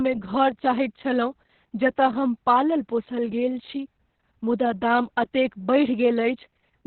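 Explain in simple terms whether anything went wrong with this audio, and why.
Opus voice compression runs through the whole clip, from start to finish, and it is heavy. To squeeze the speech into very little data, the coder kept only the narrow band a telephone carries, so nothing above about 4.3 kHz survives. That is why the speech sounds muffled and dull. It also described the buzz of the voice only roughly, which adds the hoarse, slightly robotic edge heard throughout.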